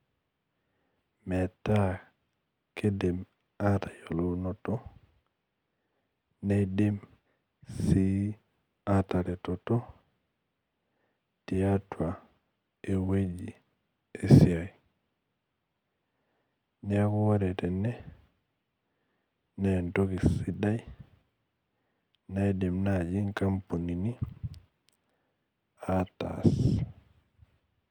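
No technical faults are audible anywhere in the speech recording.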